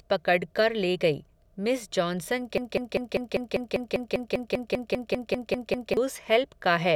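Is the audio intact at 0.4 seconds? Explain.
Yes, the speech at 0.4 seconds plays through intact, with no dropout, click, distortion or other break in the signal at that point.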